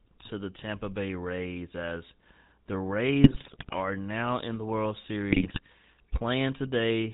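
Buzzy, gravelly speech runs through the whole recording, with everything above 4 kHz missing. That is the GSM full-rate codec, whose coarse pulse-train excitation roughens the voice, and the damage is plainly audible, which fits a 13 kbps full-rate link. From 3.24 to 3.75 s and again from 5.30 to 5.60 s, the voice breaks into squawks, pops and gargling. These are GSM bit errors: corrupted filter, pitch and gain values reach the decoder, warping the spectrum and level frame by frame.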